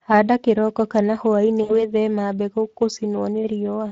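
Throughout, the speech carries the coarse, hoarse texture of the Speex codec. This CELP coder models the voice with a filter and a coded excitation. The damage is plainly audible, which fits a bitrate near 21 kbps.

From 1.63 to 1.86 s comes VoIP packet loss concealed by the speech codec. About 60 ms of audio is missing, which fits three lost 20 ms frames. The decoder stretches the last sound into a fading buzzy tone or coloured noise. The voice then recovers weakly.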